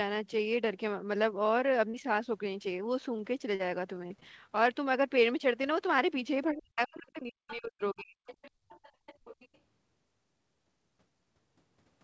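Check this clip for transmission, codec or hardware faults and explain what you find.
Several transmission faults affect this speech clip: brief concealed dropouts, a stretch of choppy loss, a suppressed passage during double talk, and echo leaking through. The high end stops at 8 kHz, which fits a wideband call codec such as G.722.

Short concealed packet loss occurs at 1.90–1.95 s, 3.55–3.61 s and 5.62–5.65 s. Each is heard as a brief smear or wobble where the sound seems to stretch. Between 20 and 40 ms of audio never arrived, and the decoder bridged the hole by extending the preceding sound before blending back.

Repeated packet loss (robotic sound) runs from 4.07 to 4.58 s. The audio turns choppy, with bits missing. Five separate gaps, the longest 30 ms, were each patched by continuing the last sound, so the patches pile up into a stuttering texture.

Speech suppressed in double talk spans 6.52–8.19 s. 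The voice sinks sharply, by roughly 40 dB at its deepest, and breaks up for about one and a half seconds. This is likely the echo canceller muting everything while both parties spoke, unable to tell the talker from loudspeaker echo.

The other side's voice leaking through appears at 7.49–7.56 s, 8.26–8.50 s and 8.68–9.58 s as a faint second voice some 20 to 25 dB below the talker. It is likely the far end's audio from the loudspeaker that the echo canceller failed to remove fully.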